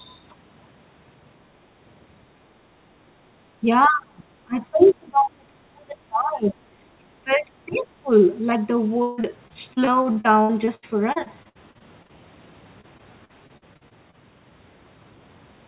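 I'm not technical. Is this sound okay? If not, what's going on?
No. There are four kinds of problem here.

From 3.28 to 3.33 s the room sound briefly dips. This is background gated by the echo canceller: the call software turned the microphone down hard for a moment while the loudspeaker was playing.

Between 3.61 and 8.1 s the talker's voice repeatedly sinks or nearly vanishes, briefly at 3.61 to 3.65 s, then heavily at 3.87 to 4.27 s, 4.44 to 6.63 s and 6.96 to 8.1 s. This is likely speech suppressed in double talk: both sides spoke at once, and the echo canceller turned the talker down along with the echo.

At 4.79 to 4.93 s and 7.72 to 7.78 s, a faint second voice slips in underneath. This is the other side's voice leaking through, likely because the echo canceller did not fully remove the loudspeaker sound from the microphone.

From 9.02 to 12.11 s and again from 12.81 to 14.15 s, the voice turns choppy and robotic. 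This is repeated packet loss. Pieces of the signal kept going missing, with up to about 156 ms lost at once. Each hole was patched by stretching the last bit of sound, and the next hole followed shortly after.

The whole clip also has the narrow, phone-like sound of an ordinary call line, with nothing above 4 kHz.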